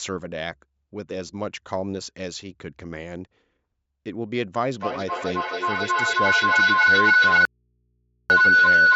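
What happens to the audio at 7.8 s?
At 7.8 s the clip sits inside an audio dropout to a faint residue, running from 7.45 s to 8.30 s. For roughly 0.85 s the signal cuts out abruptly, leaving only mains hum about 50 dB below the speech level. The cause is likely a lost input while the downstream path stayed live, which is why the gap holds hum instead of true silence, and the sound returns just as suddenly.

The same moment also falls within a feedback howl that starts at 4.7 s and continues to the end of the clip. Here a microphone and loudspeaker in the same room form a loop that adds level on every pass, so the repeats grow and narrow to a tone of around 1.5 kHz. The tone pulses roughly every 300 ms, matching the loop delay, and peaks at about 12 dB above the speech.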